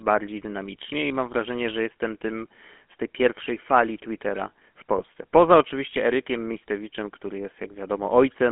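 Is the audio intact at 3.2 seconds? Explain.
No. At 3.2 seconds, as throughout, the speech sounds buzzy and gravelly and is confined to roughly 200 Hz–3.4 kHz. This is the GSM full-rate codec, which rebuilds the voice from a vocal-tract model driven by coarse, regularly spaced pulses, consistent with a 13 kbps stream.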